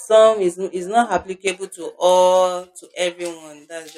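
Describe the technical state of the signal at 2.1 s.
At 2.1 s the speech has pre-emphasis left on, from 1.47 s to the end of the clip: the treble boost was never undone, leaving highs about 11 dB up at 10 kHz against 1 kHz. Sibilants turn harsh and the sound is thin. The lift fits a J.17-style curve.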